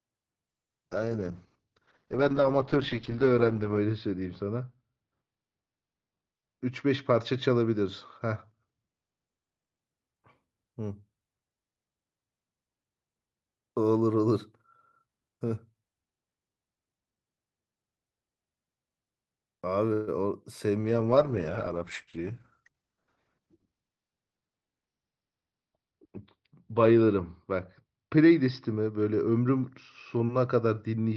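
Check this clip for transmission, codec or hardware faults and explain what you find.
Three kinds of network-related fault are present: two call bitrate drops, one call audio freeze and two bursts of jitter buffer speed-up.

From 0.49 to 9.87 s, a call bitrate drop takes the encoder from 64 to 8 kbps, bottoming out for about 3.3 s. Starved of bits, Opus quantises coarsely and narrows the band from 20 kHz to 8 kHz, so the speech turns muffled and watery. Unlike a simple low-pass filter, it also adds this grainy roughness.

At 19.93 to 20.09 s a call audio freeze, likely from delayed packets draining the jitter buffer, fills 140 ms with a fading continuation of the last sound. Unlike a dropout, nothing is lost. Speech resumes exactly where it paused, just later.

A second call bitrate drop runs from 20.8 s to the end, falling from 64 to 9 kbps and staying at its lowest for about 5.2 s. The band shrinks from 20 kHz to 6 kHz, which makes it duller than the first drop.

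Jitter buffer speed-up occurs at 22.17 to 22.97 s (111% speed, roughly a tenth of a second cut) and at 23.39 to 23.67 s (114%, roughly 50 ms cut). The receiver trims pitch periods to shed the backlog. Speech sounds hurried, but unlike resampling, the pitch stays unchanged.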